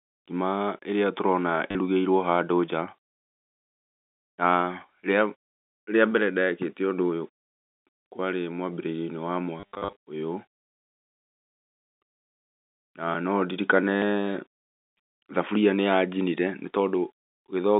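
Speech over a G.711 telephone line, band-limited to roughly 200 Hz to 3.7 kHz, suffers packet loss with the last packet repeated at 1.71–1.75 s, 7.9–8.06 s just before "kwarĩ mwambĩrĩrioinĩ wa", in scattered bursts from 9.6 to 9.96 s just after it, and at 13.96–14.02 s. The receiver replays stale audio, so the gaps buzz at about 100 Hz, which fits 10 ms packets, rather than dropping to silence.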